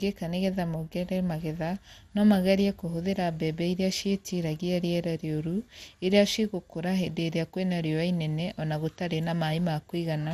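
Speech, with generation loss throughout. It sounds swirly and hollow, attacks blur, and nothing remains above 15.3 kHz. The likely cause is about seven passes of MP2 encoding, fitting 96 kbit/s.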